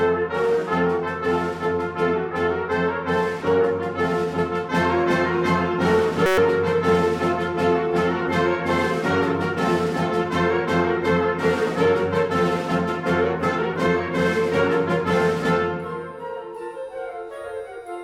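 At 6.26 s the sound abruptly turns into a flat, steady buzz at about 188 Hz that lasts until 6.38 s. This is a system hang loop: the computer or its audio driver briefly froze while the sound hardware kept replaying the same tiny stretch of its ring buffer. Each pass is 5.33 ms long, which fits a 256-sample buffer, and it repeats 22 times. Because the slice is so short, the repetitions fuse into a pitched drone rather than a stutter.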